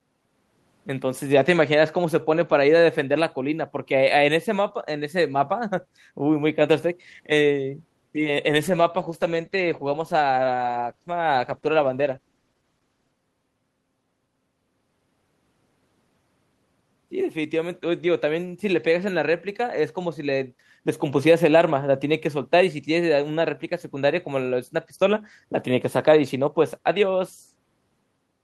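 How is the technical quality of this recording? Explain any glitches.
The speech has one glitch, a call bitrate drop from 8.51 s to 13.19 s. The call's bandwidth estimate fell, so the Opus encoder was pushed to spend far fewer bits, which fits a fall from about 32 kbps to roughly 14 kbps, held for 4.6 s. Coarser coding makes the speech rough, watery and duller until quality returns. Packet loss would cause stutters or gaps, but here the sound stays continuous and the degradation is sustained.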